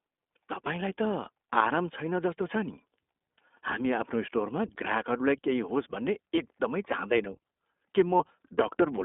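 iLBC codec throughout the speech: the line is confined to roughly 250 Hz to 3.5 kHz, and each short frame is coded on its own, which fits 20 ms frames at 15.2 kbps. The result is plainly audible roughness and a slightly synthetic edge.

Lost iLBC frames at 3.38 s, 6.36 to 6.39 s, and 8.18 to 8.21 s: the decoder filled about 60 ms, then 20 ms, then 20 ms of missing audio by repeating the last pitch cycle blended with noise. Each gap sounds like a briefly held, buzzy vowel, and the voice is right again almost at once afterwards.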